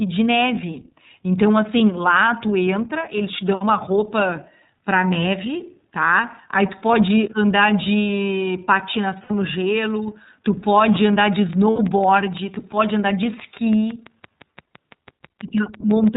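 The whole clip is speech squeezed through the iLBC codec. It's narrowband, so nothing above 4 kHz gets through, and the voice sounds a bit rough and synthetic. The damage is plainly audible. The character points to the 13.33 kbps mode with 30 ms frames, where each frame's excitation is coded on its own, without borrowing from the frame before.

At 9.24 to 9.31 s there's a short stretch of lost iLBC frames, about 60 ms, which fits two 30 ms frames going missing. The decoder fills the hole by repeating the last pitch cycle with some noise mixed in, so you hear a brief held, slightly buzzy vowel. Because the frames stand alone, the voice snaps back right after.

From 11.02 s to 16.09 s a train of clicks runs over everything, pauses included. There are about 30 of them, evenly spaced at roughly 5.9 per second, all much the same shape, and their peaks sit about 5 dB above the signal. That steady ticking most likely comes from interference from nearby equipment or a faulty connection or power supply injecting a pulse each time.

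Inside that stretch, at 11.7 to 11.8 s, comes a second patch of lost iLBC frames, about 90 ms this time, consistent with three frames dropped. The concealment holds that buzzy, breathy vowel a little longer before the speech recovers almost immediately, with the clicks carrying on underneath.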